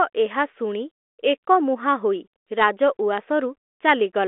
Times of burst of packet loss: none

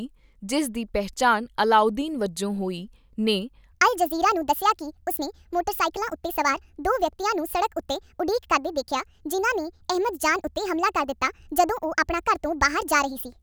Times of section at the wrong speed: 3.71-13.42

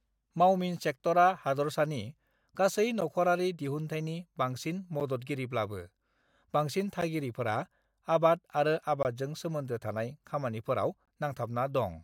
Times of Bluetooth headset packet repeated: none

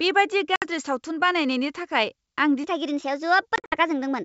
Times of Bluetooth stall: none

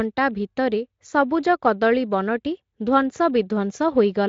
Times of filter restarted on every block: none

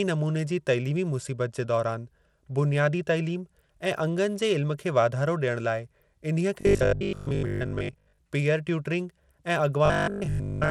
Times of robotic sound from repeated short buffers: 6.61-8.19, 9.86-10.70

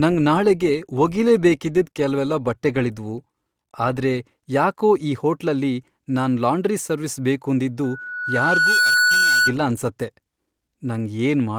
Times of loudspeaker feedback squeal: 7.83-9.54

